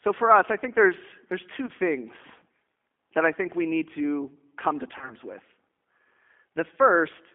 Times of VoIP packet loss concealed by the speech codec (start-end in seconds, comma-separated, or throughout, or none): 1.66-1.70, 4.98-5.16